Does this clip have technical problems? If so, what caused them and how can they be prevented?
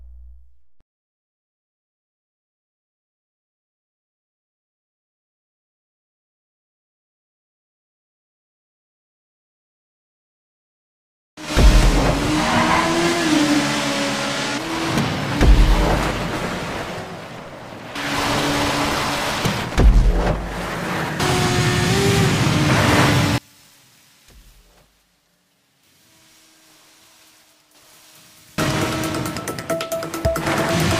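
Yes. From 23.38 to 28.58 s the sound drops by about 32 dB and turns faint. The likely cause is one channel inverted. One stereo side has flipped polarity. When the two sides are summed to mono, everything they share cancels. Only the small difference between them survives. That explains the sudden faint quality for those five seconds. Prevent it by checking polarity on every channel and monitoring a mono fold-down before export.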